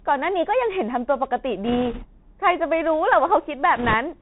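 The whole clip runs through a Bluetooth CVSD headset codec, and you can plainly hear it: nothing above 4 kHz, a grainy hiss under the speech, and scratchy s sounds where the one-bit delta steps can't keep up, all consistent with a 64 kbps headset link. Then there are bit errors on the Bluetooth voice link from 1.65 to 2.06 s and again from 3.76 to 3.94 s. Flipped bits at a rate of a few percent smear a rushing, crackly noise over the speech, with no sharp clicks because each bit only nudges the level slightly.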